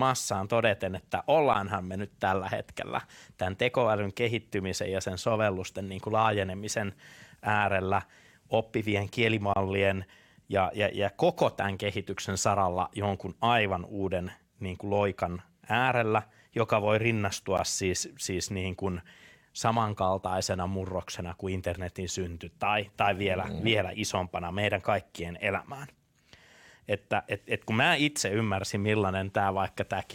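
Three short holes from a gap between stream segments cut into the speech. The first, around 14 ms, lands at 1.53 s, right after "todeten että" and before "me nyt tällä hetkellä". A longer one of about 27 ms runs from 9.54 to 9.56 s after "kuin laajenemisen äärellä oppivien". The last, again around 14 ms, sits at 17.57 s between "loikan äärellä joka voi" and "siis siis niin kuin". In each case the timestamps of adjacent chunks don't quite meet, so the player drops in silence, giving a hard-edged dropout with nothing actually missing. The spacing fits 4-second segments.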